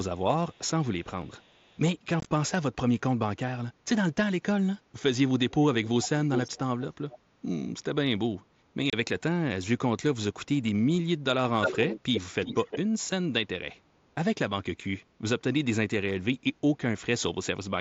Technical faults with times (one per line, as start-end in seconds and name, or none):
0.16-0.60 echo leak
1.04-1.79 echo leak
2.20-2.26 unconcealed Bluetooth headset packet loss
5.50-5.54 echo leak
5.85-7.18 echo leak
8.90-8.93 unconcealed Bluetooth headset packet loss
11.61-12.78 echo leak